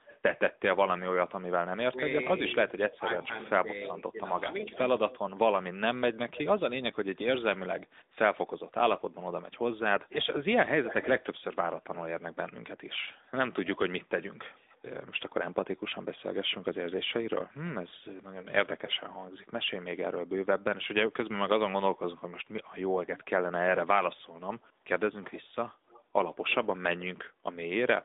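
Throughout, the speech sounds boxed-in and buzzy, with clearly audible coding roughness and nothing above 3.8 kHz. The band sits at about 250 Hz to 3.7 kHz. This is the AMR narrowband mobile codec, whose sound fits a mid-rate mode near 10 kbps.

From 0.05 s to 18.93 s, a faint, delayed copy of the speech trails it by about 290 ms, roughly 15 dB below the direct sound. This echo leak likely comes from a loudspeaker on one side whose echo canceller let part of the pickup back into the call.

Between 1.73 s and 4.77 s, the talker's level dips by as much as about 15 dB in short patches totalling around a second. This is speech suppressed in double talk, likely because the echo canceller turned everything down while both sides spoke at once.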